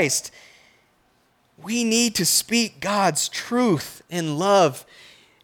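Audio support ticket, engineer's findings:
No technical faults found in the speech signal; nothing in the capture, processing or playback path needs action.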